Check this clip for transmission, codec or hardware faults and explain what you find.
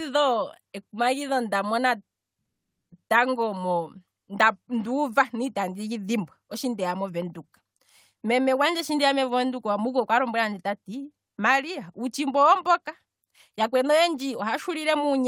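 One fault is present, a long network dropout in the speech between 2.45 and 2.93 s. For just under half a second, no audio reaches the listener. The receiver's concealment briefly stretches the last sound into a fading buzz, then leaves near-silence for the rest of the gap. Speech resumes at 2.93 s with the missing stretch simply gone rather than delayed. The likely cause is a run of lost or late packets on the network path.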